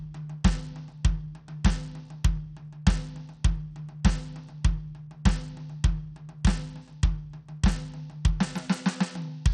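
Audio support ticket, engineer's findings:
Music, entire clip: nothing above 12.3 kHz, upper band flickering in and out, gritty noise and aliasing on the mix, plainly audible. Probable component: likely Bluetooth SBC compression with a starved bit pool, fitting around 80 kbps. Top sub-bands lose bits; rest coarsely quantised. Versus AAC/MP3: grit and aliasing, not watery swirl.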